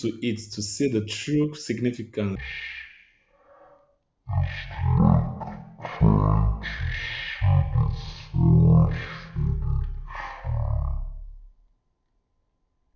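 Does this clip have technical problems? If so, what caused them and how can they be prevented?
Yes. From 2.35 s to the end, there is a wrong sample rate fault. The audio is played back at a third of the rate it was captured at, consistent with 48 kHz material run at 16 kHz without resampling. The speech drags at one-third speed and drops about 19 semitones. Prevent it by reading the file's declared rate and resampling to the output device rate before playback.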